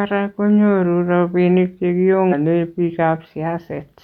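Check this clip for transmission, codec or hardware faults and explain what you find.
One fault appears in this speech clip. From 2.28 to 2.33 s, damaged data in the compressed stream makes the decoder lose frame sync and resynchronise, producing a brief glitch.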